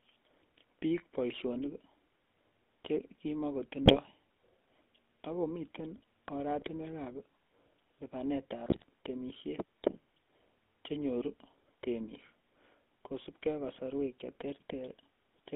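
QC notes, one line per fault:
Throughout: GSM full-rate codec. The speech sits in a narrow line band of roughly 250 Hz to 3.5 kHz and has that buzzy, gravelly grain from a pulse-driven vocal-tract model, which fits 13 kbps GSM full rate. The damage is plainly audible.
3.86–3.98 s, 6.58–6.68 s, 8.66–8.84 s: GSM bit errors. Short bursts of squawk and gargle where corrupted filter, pitch or gain values reach the decoder, so the spectrum twists and the level jumps for a frame or several. The last burst runs longest.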